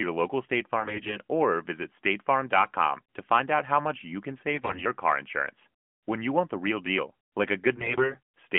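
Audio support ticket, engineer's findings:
AMR bit errors, three bursts: 0.80–1.17 s, 4.54–4.84 s, 7.76–8.19 s. Voice goes hoarse and gargly, pitch and level roughly hold. Radio link flipping around a tenth of the weakly protected bits, a bit more in the middle burst; checksum on the core bits still passes, so garbled pulse positions and fine gain/spectrum values get decoded anyway. Underlying narrowband codec sounds like the 12.2 kbps mode, band about 150 Hz to 3.4 kHz, only light coding grit.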